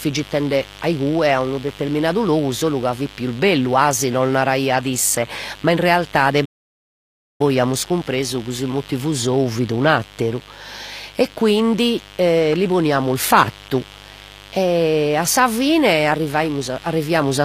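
Mains buzz runs throughout: a steady, raspy 50 Hz buzz well below the speech level, from switching spikes leaking in twice per mains cycle and spreading harmonics upward. HE-AAC compression is also present throughout: the treble sounds gritty and synthetic, likely from spectral band replication at a low bitrate near 24 kbps. A playback stall occurs from 6.45 to 7.41 s: the speech cuts to silence for about 0.95 s mid-flow, likely because the player ran short of data, before resuming.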